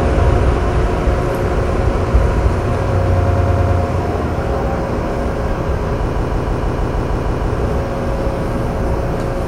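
An everyday-sound recording with two bursts of repeated frames. From 3.25 to 3.78 s, a block of about 104.5 ms plays five extra times, which fits a run of roughly four compressed frames being duplicated and adds 0.52 s. From 6.10 to 7.51 s, a 156.7 ms block plays nine extra times, pointing to about six duplicated frames and adding 1.41 s. The decoder faithfully replays data sent or written more than once, so each section stutters and the clip runs longer.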